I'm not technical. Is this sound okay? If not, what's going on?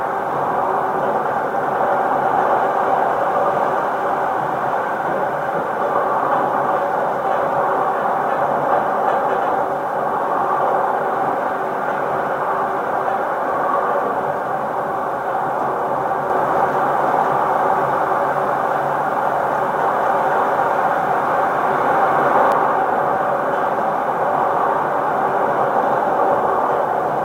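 No. From 16.3 to 22.5 seconds, there is a doubled audio track. The same sound plays twice. The second copy trails the first by about half a second. It is roughly as loud as the original, so you hear a clear repeat rather than a faint echo. It has no fading tail like a real echo. It starts and stops suddenly. The likely cause is the sound being recorded a second time through a slower route.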